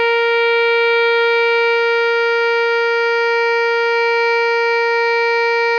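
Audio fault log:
Nothing stood out on listening to this music.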